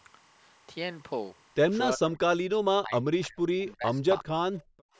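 Linear timecode from a neighbouring track or cable has leaked into this speech recording throughout. Its 25 frame-per-second code, switching between tones near 1 kHz and 2 kHz and sitting roughly 30 dB below the speech, is heard as a steady chirping warble underneath. The call's echo canceller likely mistook moments when both sides were talking for loudspeaker echo and turned the near talker down. The result is speech suppressed in double talk: the voice drops out or sinks sharply at 1.96 to 2.21 s, 2.79 to 3.38 s and 4.21 to 4.30 s, and dips more mildly between 3.58 and 4.03 s. The same canceller also likely failed to remove all of the far side's sound picked up by the microphone. This echo leak, a faint copy arriving about 350 ms late, is heard as a brief scrap from 4.58 to 4.64 s. Right after that, from 4.64 to 4.96 s, the canceller clamped the microphone down by about 40 dB. This background gating makes the room sound drop away for roughly a third of a second.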